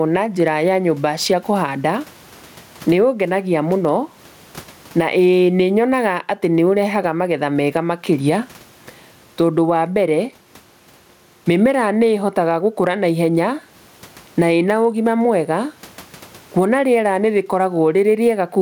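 Throughout the speech, gain pumping is audible, with the level swinging by something like 20 dB. The likely cause is input gain set far too high, with a fast limiter or compressor clamping down on each loud syllable. Loud and quiet passages sit unnaturally close in level and the delivery sounds squashed. The room noise sits about 45 dB below the speech.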